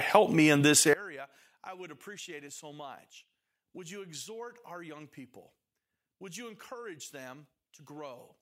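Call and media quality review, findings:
One channel inverted, 0.93 s to end, right after "me in this". Mono sum drops about 23 dB; centred speech nearly cancels, leaving a faint residue. Waveform shrinks to near-flat; spectrogram fades across all frequencies. Likely a polarity flip in one stereo leg.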